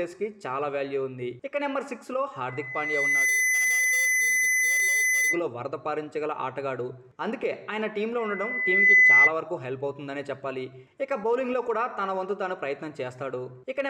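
Loudspeaker feedback squeal shows up twice: a 2 kHz tone swells over about 0.7 s from 2.48 to 5.43 s, sitting a little above the audio, then returns from 8.18 to 9.33 s, much louder. The microphone is catching its own speaker, and the loop runs away at that frequency.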